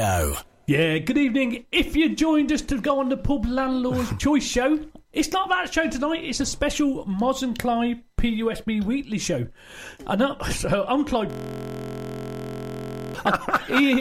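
From 11.30 to 13.15 s a system hang loop takes over. The machine froze while the hardware kept replaying one 23.22 ms buffer, which fits a 1024-sample ring buffer. Its exact repeats fuse into a steady 43.1 Hz buzz, not a slower machine-gun stutter or a silent dropout.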